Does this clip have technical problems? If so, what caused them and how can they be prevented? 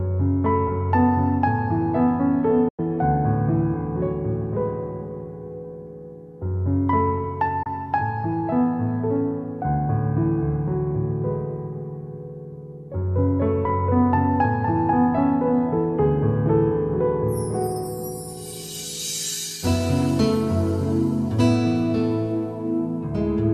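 Yes. There are two digital broadcast dropouts: the receiver stopped getting decodable frames and muted until valid ones returned. Each time the sound fades out over about 8 ms and falls silent. The first hole runs from 2.68 to 2.79 s, with about 96 ms of programme missing, which fits four lost frames of 24 ms each. The second, from 7.63 to 7.67 s, loses about 24 ms, consistent with a single frame. Whatever was broadcast during those gaps is gone. Preventing this means ensuring a strong, stable signal at the receiver through better antenna placement, gain or cabling, or relying on stronger error protection or a more robust transmission mode.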